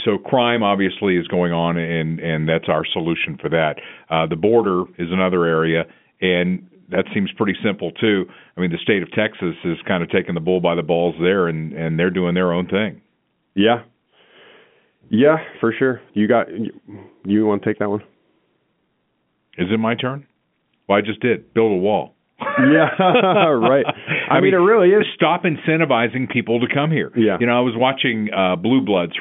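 Nothing's wrong here: it's just speech over an ordinary G.711 telephone line, carrying the usual 150 Hz to 3.4 kHz phone band, and there's nothing that needs fixing.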